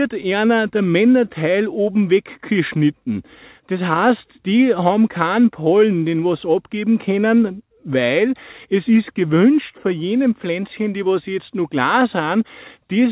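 The signal carries no technical faults, and its band stops at 4 kHz, which fits a narrowband telephone-style call codec at 64 kbps.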